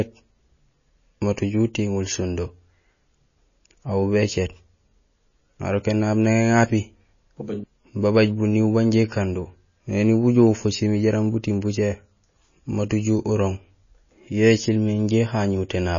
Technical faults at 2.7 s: MP3 compression

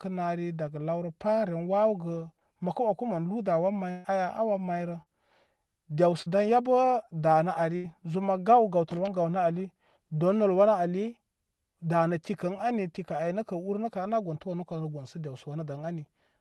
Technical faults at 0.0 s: none

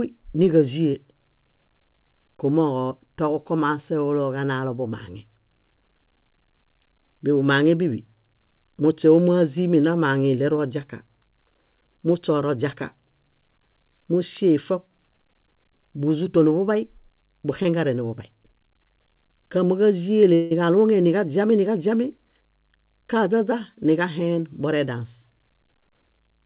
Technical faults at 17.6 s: short concealed packet loss

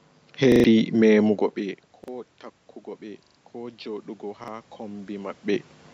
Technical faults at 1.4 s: none

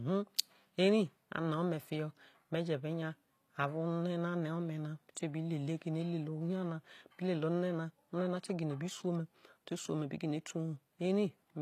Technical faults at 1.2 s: HE-AAC compression

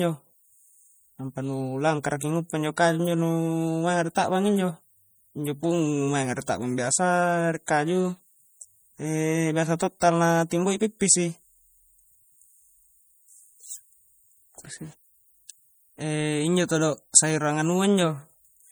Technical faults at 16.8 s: MP3 compression

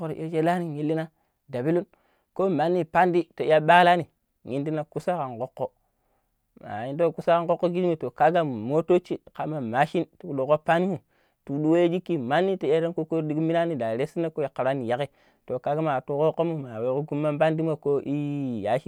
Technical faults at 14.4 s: none

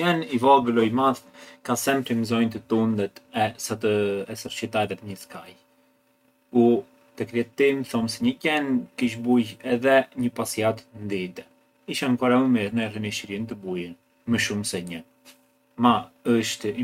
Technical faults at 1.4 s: none

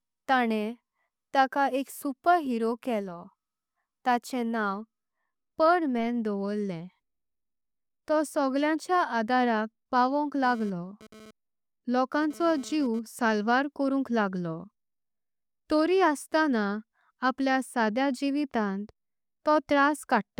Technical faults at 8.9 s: none

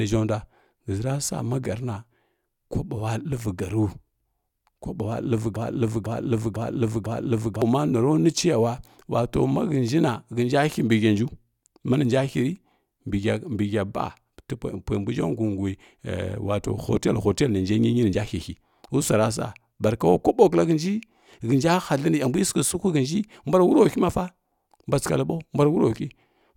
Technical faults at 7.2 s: broken-record loop

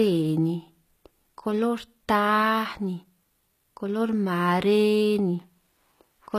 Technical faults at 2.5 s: HE-AAC compression

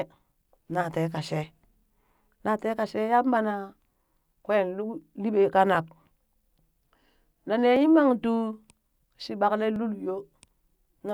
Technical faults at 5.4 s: clock drift buffer slips

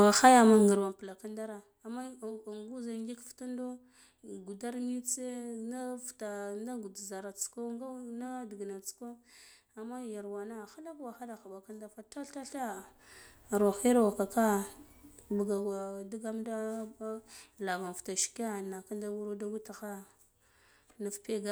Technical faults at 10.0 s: none

